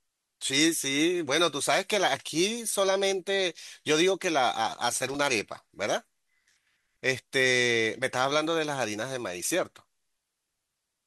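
At 4.96 s, running to 5.15 s, an irregular burst of scratchy crackle cuts into the speech for about 0.19 s: loose connector crackle. A worn or dirty contact is making and breaking rapidly, chopping the signal on and off, and any DC on the line turns each break into a pop. The ragged, uneven spacing and gritty texture set it apart from digital dropouts, which tend to leave clean gaps or regular clicks.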